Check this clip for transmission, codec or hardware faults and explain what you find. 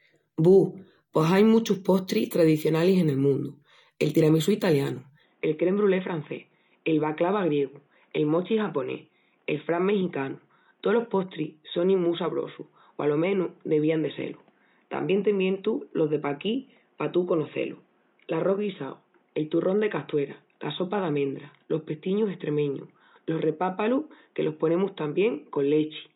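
One fault is present. Input switched to a poorer device, from 5.23 s to the end, just after "tiramisú italianu": the recording likely moved to a narrower-band microphone, so nothing above 3.8 kHz survives. The speech turns dull and boxy with no gap, drops about 5 dB, and gains a new noise floor roughly 40 dB down.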